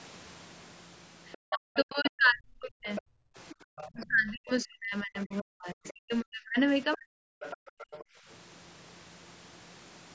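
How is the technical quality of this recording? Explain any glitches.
The recording has clear echo-control problems. A second voice leaks in, the main talker is repeatedly pushed down, and the room sound drops out twice. The band stops at 8 kHz, as call microphone processing does.

Other side's voice leaking through appears from 1.32 to 4.06 s, 5.88 to 6.15 s and 7.4 to 8.05 s. A fainter second voice sits under the speech. It is about 15 dB below the speech in the first stretch, about 25 dB below in the second, and about 20 dB below in the third. The likely cause is a loudspeaker on the talker's device. Its sound reached the microphone, and the echo canceller did not fully remove it.

Speech suppressed in double talk runs from 1.49 to 3.01 s and from 3.93 to 7.24 s. The main voice dips and breaks up in pieces. The drops reach roughly 40 dB. About one and a half seconds is affected in the first stretch, and about three seconds in the second. 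Both sides were likely talking at once. The canceller could not tell its own talker from the echo, so it turned everything down.

Background gated by the echo canceller occurs from 3.17 to 3.65 s and from 7.62 to 8.27 s. The room sound suddenly falls away, by about 31 dB and about 29 dB. Each gap lasts roughly a third of a second. The canceller clamped the microphone hard while the loudspeaker was active. The ambience returns once it lets go.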